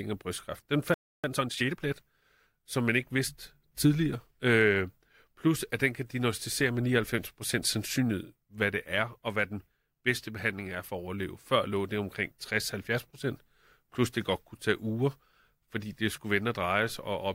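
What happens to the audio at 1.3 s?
At 1.3 s you're in time-compressed catch-up, running from 1.24 to 1.82 s. The player is clearing a backlog by snipping out small bits and cross-fading the joins, so the speech comes through hurried, about 1.5 times normal speed, at its usual pitch.

That backlog comes from the playback stall just before it, 0.94 to 1.24 s: the speech cuts to silence mid-flow for roughly 0.3 s, then carries on. The player most likely ran dry of data or had its thread blocked.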